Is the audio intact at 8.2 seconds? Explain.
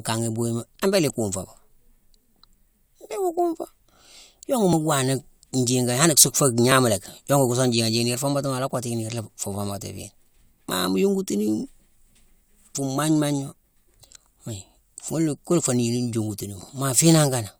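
Yes, at 8.2 seconds the speech plays through intact, with no dropout, click, distortion or other fault to be heard at that moment.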